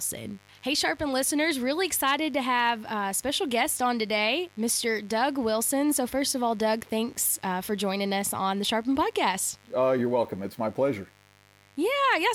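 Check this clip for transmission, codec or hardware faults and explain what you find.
There is one hardware fault, present for the whole recording.

Mains buzz, throughout: sharp switching spikes from the 50 Hz supply, recurring twice per cycle, leak into the signal path and spread harmonics up into the kilohertz range. It sits about 30 dB under the speech as a steady, raspy buzz.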